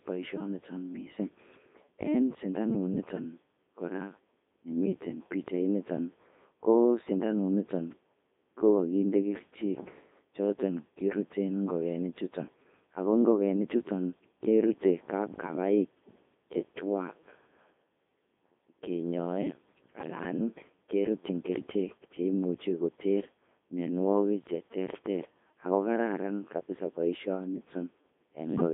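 Speech runs through a Codec 2 vocoder for the whole clip. The voice sounds robotic and buzzy, rebuilt from sine waves rather than kept as a waveform. Heavy damage fits the top 3.2 kbit/s mode. The line band spans 200 Hz to 3.6 kHz, with nothing above 3.7 kHz.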